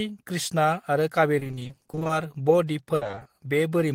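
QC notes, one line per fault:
1.39–2.11 s, repeated packet loss (robotic sound): 20 ms holes recur about every 40 ms, each patched by extending prior sound, so half the span sounds choppy. A spectrogram shows smeared, repeating vertical bands.
2.95–3.27 s, repeated packet loss (robotic sound): fewer but longer holes, up to 60 ms, are concealed by stretching prior audio over more than half the span. The waveform shows repetitive, copied stretches.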